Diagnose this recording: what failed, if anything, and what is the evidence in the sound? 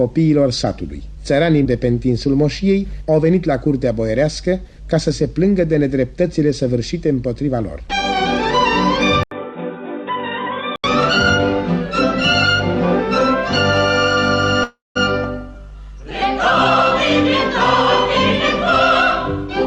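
From 9.23 to 10.84 s the sound turns dull and boxy. Nothing remains above 3.8 kHz. The level drops by about 10 dB. A faint new background noise appears, roughly 50 dB below the signal. An 80 ms silence marks the switch. The stage is the capture end, at the input device and driver. This is likely an input switched to a poorer device, such as a headset's call profile. That device passes a narrower band and carries its own level and noise.

At 14.63 s the audio stops and a fading buzz carries the last sound forward. It then falls to about 180 ms of silence. At 14.97 s the sound resumes where it left off. Nothing is lost. About 0.32 s has been inserted, so everything after runs that much later. The stage is the network and call receiver. This is likely a call audio freeze. Delayed packets emptied the jitter buffer, and the receiver filled the wait.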